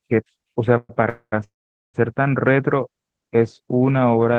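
Packets most likely stalled in transit and the jitter buffer ran dry three times, producing call audio freezes at 0.77 to 0.91 s, 1.09 to 1.34 s and 1.44 to 1.96 s. Each time the receiver stretched the last sound into a fading buzz that drops to silence for roughly 0.03, 0.07 and 0.44 s. The audio then resumes where it stopped, pushed later by about 0.12, 0.23 and 0.5 s, with nothing lost. The Opus-coded sound tops out near 12 kHz.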